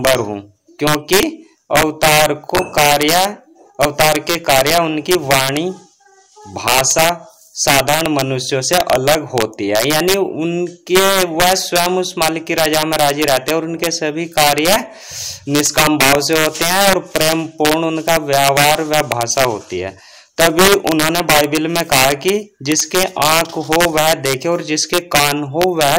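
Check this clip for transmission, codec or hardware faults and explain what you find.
Integer overflow runs through the whole clip. The signal is driven about 5 dB past full scale. Roughly one percent of samples wrap to the opposite sign, causing violent cracks on loud peaks.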